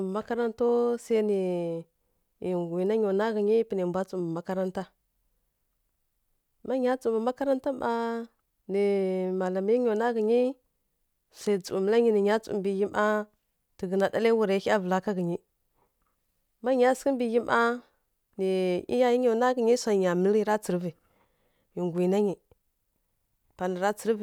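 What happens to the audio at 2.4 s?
Nothing goes wrong at 2.4 s; the speech runs on intact through that moment with no dropout, click or other technical fault.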